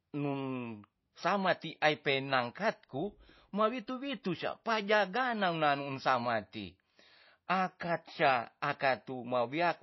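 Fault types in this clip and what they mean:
MP3 compression: the speech has nothing above 5.8 kHz and plainly audible codec damage throughout, a watery, swirly texture as weak frequency lines drop in and out between frames. The likely cause is MP3 encoding at a bitrate around 24 kbps.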